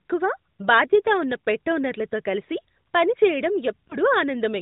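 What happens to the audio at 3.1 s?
At 3.1 s the speech continues intact, with no dropout, click or other fault, carried through the narrowband AMR mobile path just as in the surrounding audio.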